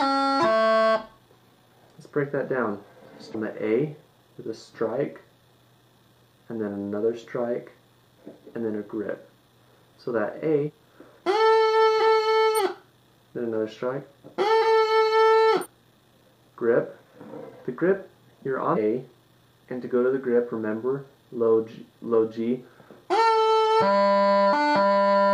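At 3.3, 10.64, 12.54, 15.61 and 18.72 s, compressed frames are skipped: the audio lurches forward by roughly 100 to 300 ms at each point, in steps that fit a 46.4 ms frame. Unlike a dropout, there's no gap of silence.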